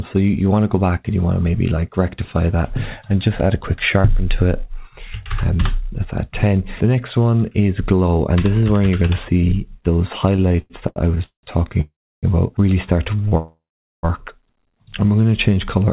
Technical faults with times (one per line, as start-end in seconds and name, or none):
10.36-11.45 repeated stalls (stutter)
11.81-12.25 call audio freeze
13.17-13.33 short stall from a late packet
13.37-14.05 call audio freeze
15.21-15.86 jitter buffer slow-down